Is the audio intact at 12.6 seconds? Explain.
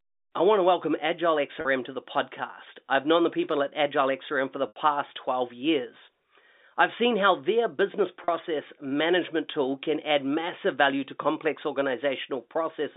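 Yes, at 12.6 seconds the speech is intact, carried over the G.711 telephone coding in its usual narrow band.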